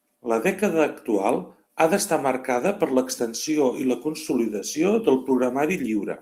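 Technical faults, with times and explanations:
2.55–2.65 s, 3.51–3.53 s and 4.45 s, lost packet rebuilt from error correction: the speech keeps going through each spot with no gap, but those moments turn briefly rough and noisy. The first, longer patch suggests about three 20 ms packets lost, and the other two suggest single packets. Each was rebuilt from the low-bitrate copy that Opus in-band FEC carries in the following packet, which is why it's grainier than the surrounding speech.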